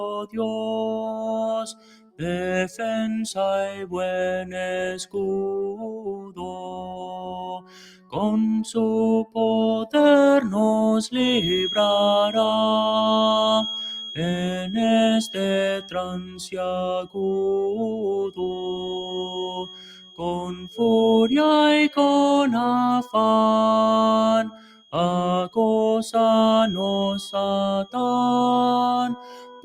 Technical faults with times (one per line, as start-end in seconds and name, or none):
0.00-29.65 noise suppressor applied to music or sounds
0.02-0.38 sound cut by the noise suppressor
0.97-8.17 sound cut by the noise suppressor
9.24-9.94 sound cut by the noise suppressor
11.12-29.65 feedback whistle
15.79-17.18 sound cut by the noise suppressor
18.29-20.79 sound cut by the noise suppressor
24.47-24.94 sound cut by the noise suppressor
29.16-29.65 sound cut by the noise suppressor